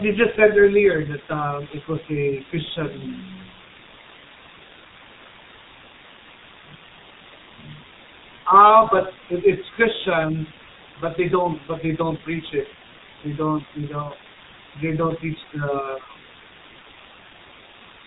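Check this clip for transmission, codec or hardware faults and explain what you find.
Two faults run through the whole recording: a coarse, dithered quantisation hiss and heavy damage from the G.723.1 codec.

Low bit depth with dither is present from start to finish. The speech sits over a constant, even hiss, roughly 15 dB below the signal, which is very high. Its level and character fit a 6-bit signal. Before each sample was rounded to so few levels, dither noise was added, so the rounding error spreads into a steady white noise floor and does not turn into distortion.

The G.723.1 codec also affects the entire clip, and its damage is heavy. Nothing above 3.8 kHz survives, so the speech sounds muffled. The codec works in 30 ms frames and updates its model of the voice slowly. That is why consonants smear into one another and the voice takes on a hoarse, rough texture. The sparse detail points to a rate of about 6.3 kbit/s.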